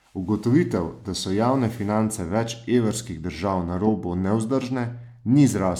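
No technical faults occur at any point in the speech, so there is nothing to describe in time order.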